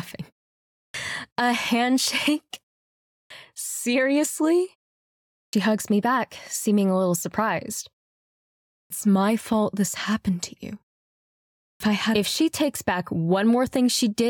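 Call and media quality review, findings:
Clipped start after a pause at 0.84, 3.21, 5.42 s (before "hugs me back seeming"), 8.8 s (before "my fault this happened") and 11.71 s (before "I had"). Each follows 0.6 to 0.94 s of silence. The output device sleeps and needs time to wake or relock, so the first 90 to 110 ms of sound is lost.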